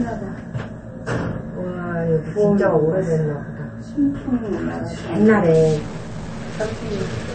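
The whole clip has a swirly, watery texture and nothing above 8.6 kHz, likely from MP3 compression at a starved bitrate, something around 37 kbps. From 5.54 s to the end, distortion sets in, with noise creeping into quiet stretches, likely a stuck bit throwing sample values off.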